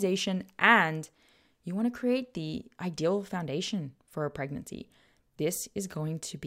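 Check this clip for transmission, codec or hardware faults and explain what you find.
No fault found anywhere in the speech.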